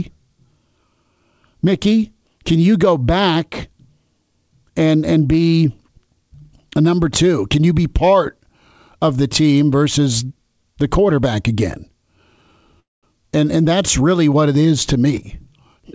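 A speech recording carried over a call link, band-limited with nothing above 8 kHz, which fits a G.722 wideband codec. At 12.80 s the sound stalls until 13.06 s: a brief tail of the last sound fades into about 200 ms of silence, then speech resumes exactly where it stopped, pushed about 230 ms later. This is a call audio freeze, likely caused by packets held up in transit so the jitter buffer ran dry and the receiver padded the wait instead of dropping anything.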